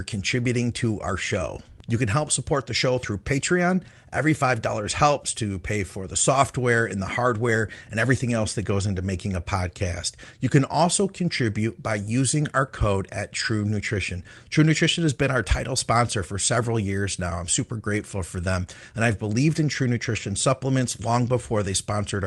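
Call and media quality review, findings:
Nothing to flag on this speech recording; it came through with no faults heard anywhere.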